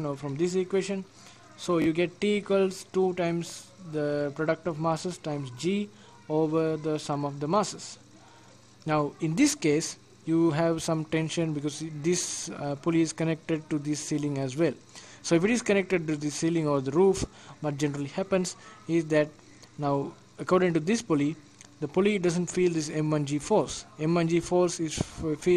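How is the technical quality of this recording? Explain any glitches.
One glitch stands out. A Bluetooth stutter occurs from 1.82 to 1.86 s. Audio data arrived late or not at all. The receiver replayed its last short slice until data resumed. That gives a brief buzzing repeat. About 41 ms of sound is skipped, which fits two lost packets.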